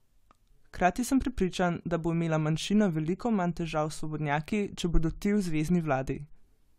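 No technical faults can be heard anywhere in it.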